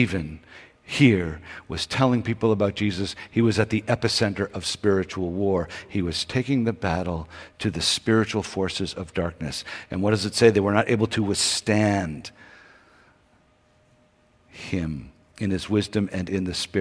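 No technical faults are audible anywhere in this recording.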